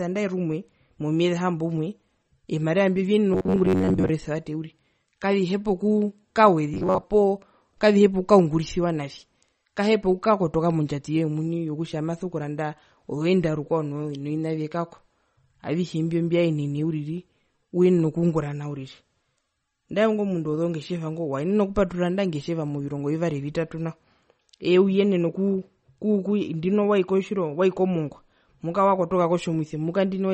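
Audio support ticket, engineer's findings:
MP3 compression, whole clip: band-limited, watery swirl as weak spectral lines drop in and out per frame, smeared onsets. Damage level fits about 32 kbps, likely codec-side. Unlike a plain low-pass, the artefacts move over time.

Robotic sound from repeated short buffers, 3.33–4.09 s and 6.74–7.06 s: rigid metallic buzz at 93.8 Hz, most of the first stretch and about half the second repeated. Period suggests a buffer of about 10.7 ms, likely capture or playback underrun. Fixed pitch distinguishes it from codec warble.

Channel delay (comb filtering), 24.27 s to end: one channel late by about two samples (about 0.05 ms), summed to mono, first notch around 10 kHz. Static dulling of the top end. Unlike MP3 swirl, the notch does not move.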